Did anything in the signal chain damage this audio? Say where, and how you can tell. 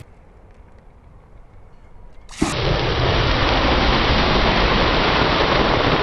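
Yes. From the start to about 2.52 s, the audio was read two samples at a time, giving double speed. This is a sample-format conversion fault. The reader treated adjacent samples as one frame, as if the stream had two channels or samples twice as wide. Each frame then used up two input samples. That section plays twice as fast and a full octave high, 12 semitones up.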